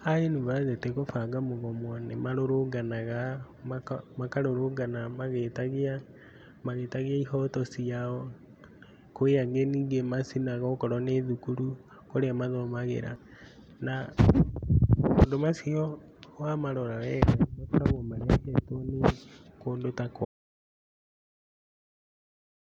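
At 20.25 s the speech cuts off into total silence through to the end, an audio dropout to silence, likely from the input signal being lost while recording continued.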